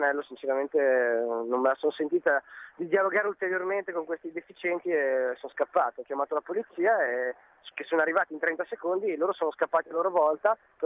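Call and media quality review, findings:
No transport, capture or playback anomalies found; the signal path shows no dropouts, level discontinuities or timing irregularities.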